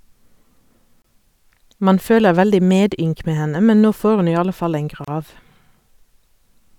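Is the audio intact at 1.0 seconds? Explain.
No. From 1.02 to 1.04 s the speech stops dead for about 24 ms, then picks up exactly where it left off. The edges of the silence are smeared by the codec, so the fully silent part is shorter. This is a gap at a join of encoded pieces. The audio was encoded in separate chunks, apparently about 4 s long, and spliced without trimming. The encoder's start-up delay and the padding of each chunk's final frame stayed in as dead air.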